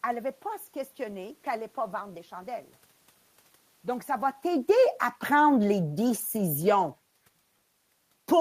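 From 4.07 to 6.83 s there's automatic gain falling. The AGC decided the input was too hot or its background noise too strong and eased its gain down by about 6 dB, so the speech and the room noise behind it sink together, just as the talker shifts position around 4 s.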